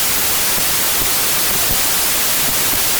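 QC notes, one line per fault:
Throughout, wrong sample width: the speech sits under loud, harsh noise and plays about 1.33 times fast and high, which points to packed 24-bit samples being read as 32-bit ones, so most values straddle neighbouring samples' bytes.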